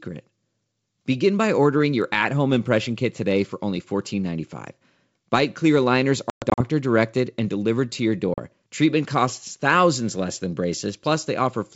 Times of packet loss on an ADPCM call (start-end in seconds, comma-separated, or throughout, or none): 6.30-6.62, 8.34-8.39